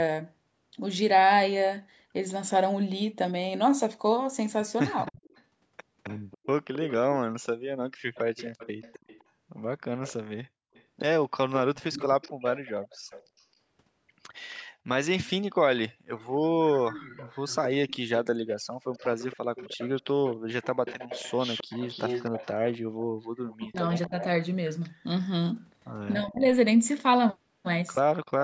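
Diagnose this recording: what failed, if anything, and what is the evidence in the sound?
Echo leak, at the call-processing stage. A delayed copy trails the speech by 266 ms, about 15 to 25 dB down, at 5.06–6.94, 8.14–10.83, 11.76–13.43, 16.18–24.25 and 28.14–28.18 s. The likely cause is an echo canceller that missed loudspeaker pickup.

Speech suppressed in double talk, also in call processing. The speech dips by about 25 dB at 23.6–24.16 s and by about 20 dB at 26.2–26.46 s. The canceller likely ducked both talkers during overlap.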